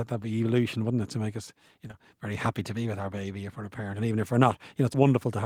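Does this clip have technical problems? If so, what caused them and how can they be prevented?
Yes. Right around 1.87 to 1.95 s there's short concealed packet loss, two back-to-back 20 ms holes in this speech that the receiver papered over by extending the preceding sound, so you get a brief smear. A jitter buffer with more headroom and forward error correction would prevent it.

There are also two tiny skips of audio missing between chunks, at 2.46 s and 4.94 s, each roughly 20 ms, spaced 2.5 s apart, likely from the recorder dropping samples at each block changeover. Gapless, overlapped buffer handoff would prevent them.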